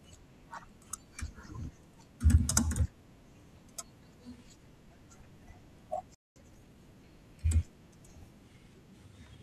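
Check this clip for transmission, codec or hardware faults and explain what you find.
Two linked playback faults occur in this speech clip, one after the other.

A playback stall at 6.15 s cuts the sound out for about 0.21 s, likely because the player ran short of data or its thread was blocked.

Time-compressed catch-up runs from 6.36 to 6.78 s. The player trims and cross-fades small slices to recover lost time, so speech hurries at 1.5 times normal speed, unchanged in pitch.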